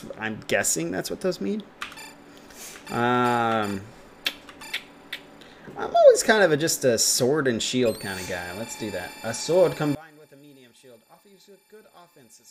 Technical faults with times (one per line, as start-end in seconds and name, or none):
9.95-12.51 one channel inverted